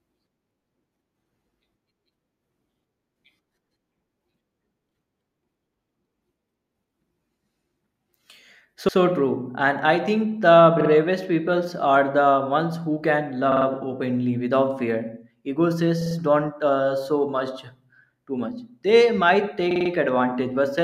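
Repeated frames: short runs of compressed audio were sent again, so the decoder replays them. A 96 ms block stutters once at 8.88 s; 48 ms blocks repeat twice at 10.80 s, three times at 13.51 s and 16.01 s, and four times at 19.71 s.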